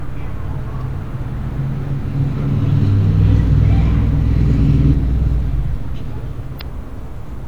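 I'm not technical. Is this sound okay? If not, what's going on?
No, two short glitches break the sound. The first is at 4.90 to 4.94 seconds and the second at 6.57 to 6.62 seconds. Each lasts about 40 milliseconds. Both come from damaged data in a compressed stream. Part of the stored file was wrong at those points. The player misread that stretch and lost its place. It then searched for the next readable piece. That is heard as a quick chirp or blip.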